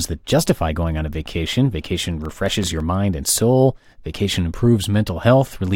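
A speech clip with processor overload crackle from 2.22 to 2.80 s, just before "mind and soul vacation": missed buffers of roughly 1.5 ms drop to silence, showing as dense waveform gaps and vertical spectrogram streaks.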